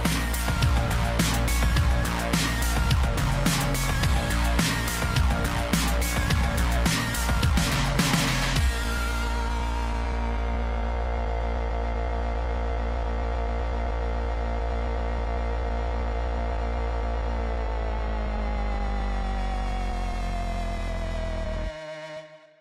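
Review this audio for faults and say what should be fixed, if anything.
Clock drift between sender and receiver runs through the whole clip. The sender's clock is roughly 5 percent fast, so the jitter buffer keeps filling quicker than the receiver drains it. To prevent it, sync both ends to a shared clock or add adaptive resampling.

Repeated timing corrections kick in from 6.33 s to the end. The receiver keeps cutting short slices to stay in step, effectively running at 105 percent speed, so the edits are small and unevenly spaced. To prevent it, absorb the drift with smooth resampling rather than dropping chunks.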